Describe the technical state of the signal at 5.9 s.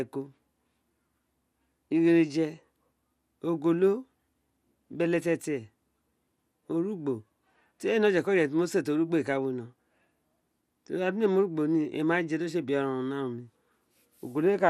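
At 5.9 s, as throughout, the speech has likely been through MP2 compression at around 80 kbps. Bit-starved upper sub-bands switch off, leaving it dull, gurgling and granular.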